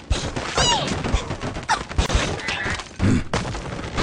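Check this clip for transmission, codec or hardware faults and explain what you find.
One fault turns up: a gap at a join of encoded pieces, from 2.06 to 2.09 s. Separately encoded segments were butted together with their start delay and end padding untrimmed, leaving a 30 ms silence with smeared edges. Unlike a dropout, the sound resumes exactly where it stopped, with nothing lost.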